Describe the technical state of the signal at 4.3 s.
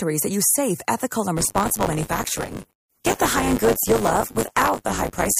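At 4.3 s the signal has buffer tearing, running from 1.36 s, after "use safe ethical and", to the end. Writer and reader cross each period. Roughly a fifth of each buffer replays audio about 20 ms old, producing a steady 100 Hz robotic buzz.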